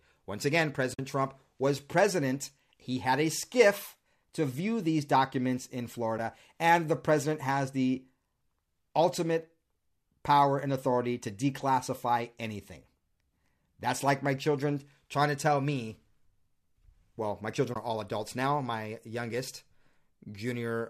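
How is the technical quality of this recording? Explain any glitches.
The recording has three brief dropouts. Each is AAC frame loss with muting, heard against the light roughness of low-delay AAC coding that likely fits AAC-ELD at about 64 kbps. AAC frame loss with muting occurs at 0.94 to 0.99 s (about 50 ms), at 6.18 s between "view these documents in" and "and the president has" (about 10 ms), and at 17.74 to 17.76 s between "well my" and "are all adults now" (about 20 ms). The decoder zeroed the missing frames' spectrum, and the overlapping windows fade the sound down and back up, leaving a brief dip for the single lost frame and soft-edged holes for the longer runs.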